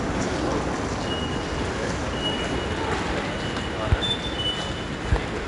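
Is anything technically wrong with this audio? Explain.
Yes. From start to finish the audio has been through 4-bit ADPCM compression, which fits a stream of about 88 kbps. Each sample is coded as a coarse 4-bit step from a predicted value, with the step size adapting over time, so the coding error becomes noise that rises and falls with the signal. The result is a plainly audible gritty hiss riding on every loud passage, and nothing is heard above 10.6 kHz, which leaves the top end dull.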